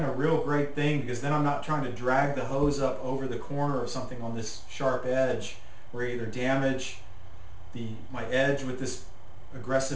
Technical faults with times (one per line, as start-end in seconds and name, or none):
0.00-9.96 aliasing